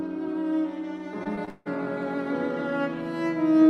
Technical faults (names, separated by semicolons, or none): repeated packet loss (robotic sound)